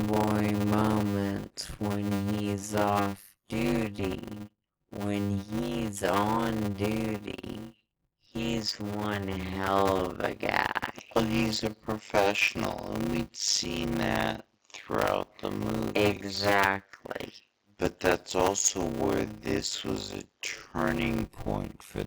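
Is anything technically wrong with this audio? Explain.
Yes, two faults are present.

Throughout, a block size mismatch (padded) adds a 100 Hz buzz and slows the audio to 0.53 times speed while keeping its timbre. This fits 256-sample blocks being zero-padded into larger reads. A rate mismatch would shift pitch too.

From 8.28 s, after "he's on duty", until 21.24 s, just before "point for the movies", the input likely switched to a poorer device. The band narrows, and a new noise floor about 50 dB down appears. Unlike plain filtering, this change is abrupt and brings its own noise.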